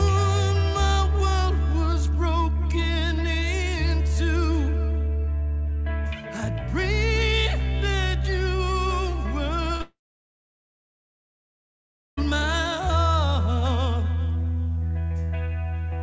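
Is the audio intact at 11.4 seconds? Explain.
No. A long network dropout runs from 9.82 to 12.19 s, likely from packets that never arrived. The receiver stretches the last sound into a fading buzz, then near-silence fills about 2.2 s, so 11.4 s falls inside the gap.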